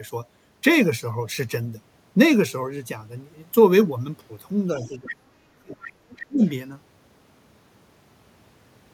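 Starting at 4.73 s the talker's speech sinks hard, dropping by something like 30 dB at its deepest and staying ducked and broken up until 5.79 s. That's speech suppressed in double talk: both ends were talking at once, and the echo canceller, likely unable to tell the near talker from the loudspeaker echo, pulled everything down together. Inside that dip, from 4.8 to 5.15 s, the other side's voice leaks through, roughly 15 dB under the speech, so the canceller has likely let some of the far end past while muting the near end. Another scrap of leakage shows up from 5.85 to 5.93 s, around 20 dB down, probably residual echo the canceller didn't fully remove. From 6.0 to 6.43 s the talker is ducked again in the same double-talk way, about 30 dB at the deepest, with the other side bleeding in from 6.17 to 6.24 s at around 20 dB below. A last, very faint fragment of the other side comes through from 6.44 to 6.49 s, buried roughly 35 dB down. 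These leaks are short rather than continuous.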